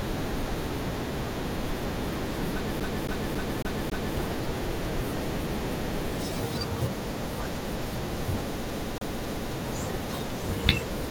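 From 2.80 to 4.17 s the speech falls into a CD stuck on one turn: the same 275 ms slice repeats five times, each jump marked by a brief mute, giving a fast, evenly spaced stutter rather than a random glitch. Inside that stretch, at 3.50 to 3.58 s, chunks out of order appear: a 20 ms chunk arrives three chunks late and plays after material meant to follow it, so the sound jumbles across the hard joins. Nothing repeats there, which sets it apart from the loop around it. From 8.71 to 9.53 s the same CD stuck on one turn returns, with the 275 ms loop repeating three times.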